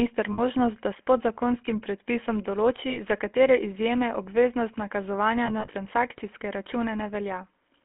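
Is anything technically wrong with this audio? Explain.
Yes. The speech has been through the GSM full-rate codec, heard plainly from start to end. The codec models the vocal tract and drives it with regularly spaced pulses, which adds a buzzy, gravelly roughness at about 13 kbps. The line band runs from 250 Hz to 3.4 kHz, so a spectrogram shows nothing above 3.4 kHz and a thin, harmonic-smeared texture.

Lost GSM frames interrupt the speech three times. From 0.32 to 0.40 s, just before "da s podzakonskim predpisom", about 60 ms are lost. From 2.90 to 3.00 s, between "s podzakonskim predpisom določi" and "za katere", another 60 ms go. From 5.46 to 5.75 s, after "obveznost nakazovanja", 100 ms are lost in short gaps spread over 280 ms, the longest lasting about 40 ms. Each time the decoder repeats the last good frame. This gives a brief metallic ring, seen as frozen horizontal bands on a spectrogram.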